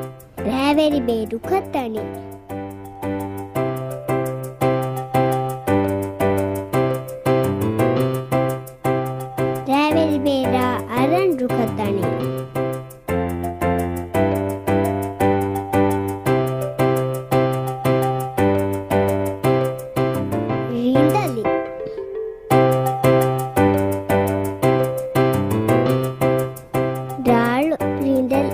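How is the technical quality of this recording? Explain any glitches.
No glitches or technical faults can be heard here.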